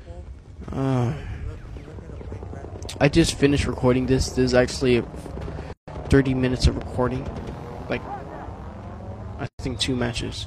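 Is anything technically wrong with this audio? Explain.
Yes, there are two gaps at joins of encoded pieces and one loud pop. The audio was built from separately encoded segments joined without trimming. Each encoder pass left its start-up delay of silence and padded its final frame. The silence opens in continuous sound at 5.73 to 5.88 s (148 ms) and at 9.47 to 9.59 s (about 119 ms), with smeared edges. The sound then resumes where it stopped.

From 6.81 to 6.84 s, a sudden voltage step or pulse, likely from a plug, switch, static or driver glitch, entered the signal path and was shaped by the circuitry after it. It is heard as a single sharp pop, peaking about 10 dB above the surrounding sound, which continues underneath.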